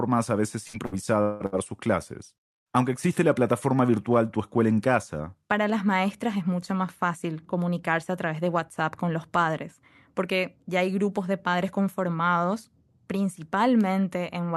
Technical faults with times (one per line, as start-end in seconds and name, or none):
0.67-1.55 repeated packet loss (robotic sound)